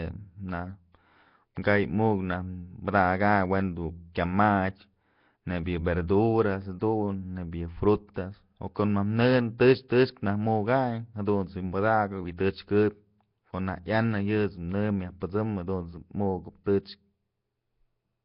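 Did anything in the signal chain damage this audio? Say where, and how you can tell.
Yes, at the codec stage. The whole clip has a rough, hissy halo and a smeared, underwater quality, with nothing above about 5.3 kHz. That's likely Nellymoser compression at a low bitrate, around 22 kbps, where weak bands get no bits and are filled with noise.

There's also pre-echo from that same transform codec at 6.80 s and 9.88 s. A short hiss creeps in just ahead of a sharp attack and softens it, because the quantisation noise from the loud part is spread into the quiet moment before it.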